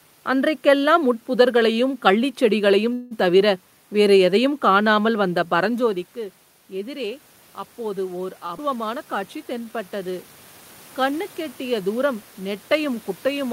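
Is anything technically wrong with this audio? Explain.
Yes. Several network and processing faults affect this speech.

From 2.93 to 3.13 s there is a call audio freeze. The last sound is held as a fading buzz for about 175 ms. Packets were likely delayed and the jitter buffer ran dry. When they arrived, speech resumed where it stopped, with nothing lost.

From 5.19 to 10.30 s the automatic gain is rising. The talker drops in level around 5.5 s, about 15 dB quieter. The gain control responds slowly, lifting voice and room noise together by about 7 dB over several seconds.

At 8.46 s there is a short stall from a late packet. A packet missed its slot, so the receiver stretched the current sound for 23 ms. It then carried on from the same point. The result is a brief held sound with a slight buzz.

At 8.57 s, just after, the audio will skip ahead. Roughly 150 ms of speech is dropped while later audio is already waiting. 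The two sides join almost directly, so that speech vanishes in a small jump.

There are two jitter buffer slow-downs, from 9.05 to 10.12 s and from 11.00 to 11.44 s. The buffer was rebuilding its reserve by repeating pitch periods. Speech plays at about 90% and 92% speed at unchanged pitch. That adds 114 ms and 40 ms, and sounds drawn out.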